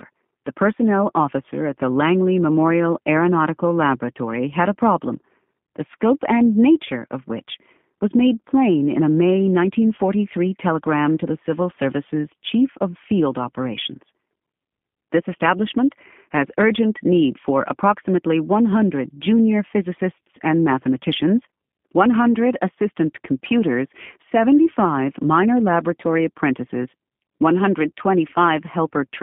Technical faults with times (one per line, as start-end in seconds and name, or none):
0.00-29.23 G.729 codec